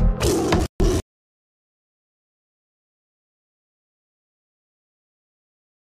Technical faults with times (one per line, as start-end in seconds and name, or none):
0.60-1.00 chunks out of order